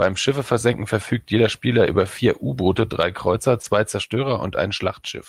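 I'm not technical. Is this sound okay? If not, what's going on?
No. At about 3.61 to 3.65 s there's a short concealed packet loss: a sliver of the call arrived too late, so the receiver guessed it. Unlike a plain dropout, you hear a brief smear instead of silence.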